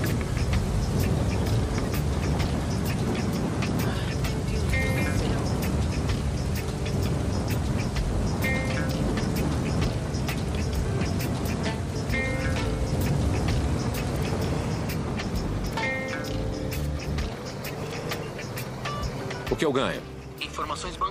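No technical faults are audible anywhere in this audio.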